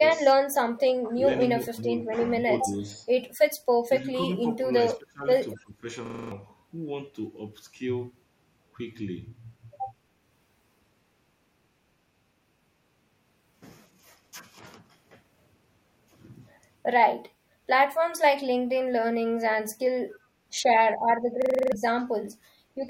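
Between 0.00 and 0.27 s, 1.71 and 3.04 s, 4.12 and 4.31 s, and 4.95 and 5.85 s the speech dips in brief patches, by roughly 5 to 25 dB, deepest near 5 s. It is speech suppressed in double talk, likely an echo canceller ducking the talker while the far side spoke. From 2.75 to 2.91 s a faint delayed copy trails by 268 ms at about 35 dB down. This echo leak is likely residue the canceller missed, a repeat rather than a reverb tail. At 6.06 to 6.32 s and again at 21.42 to 21.72 s, a 42.67 ms slice repeats six and then seven times, a 23.4 Hz stutter. That is a system hang loop, which fits a 2048-sample buffer cycling while the system froze, and it is exact repetition rather than a jittery glitch. At 17.34 to 17.48 s and 20.08 to 20.22 s the room sound alone dips about 6 and 8 dB for a moment. It is background gated by the echo canceller, since it touches the ambience rather than the speech.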